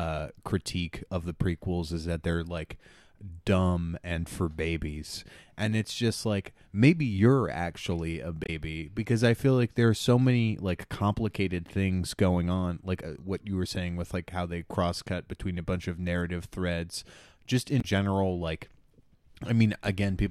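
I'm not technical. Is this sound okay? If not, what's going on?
No, there are two brief glitches from damaged data in a compressed stream. At 8.43–8.49 s, after "maybe you're actually a", and at 17.78–17.84 s, after "of narrative threads just", garbled bits of the file make the player stumble briefly.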